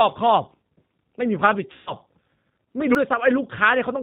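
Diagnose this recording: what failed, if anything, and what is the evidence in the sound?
The whole clip carries G.729 codec damage, introduced at the codec stage. The speech is band-limited with nothing above 4 kHz, and it has the rough, slightly synthetic texture of speech rebuilt from a vocal tract filter, a pitch predictor and a few pulses per frame. The damage is plainly audible and fits an 8 kbit/s G.729-family encoder. Plain low-pass filtering would leave the tone clean, so the rough, synthetic texture is what identifies this as the codec.

At 1.18 s and again at 2.95 s the sound jumps abruptly. There is no gap and no fading. The first jump loses about 20 ms and the second around 70 ms. The likely cause is a dropped buffer (overrun) at the driver or buffer stage: the hardware overwrote samples before the program collected them, and the surrounding audio was spliced together directly. 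A network loss would be concealed and smeared rather than cut cleanly.

From 1.72 to 1.94 s the speech turns into a stretched, fading sound instead of jumping. This is VoIP packet loss concealed by the speech codec, a network fault. About 140 ms of audio is missing, which fits seven 20 ms packets. The decoder extrapolated from its last pitch and filter and lowered the gain each frame, and the voice stays weak briefly after recovery. The stretched, fading sound with no skip distinguishes this from the buffer overruns.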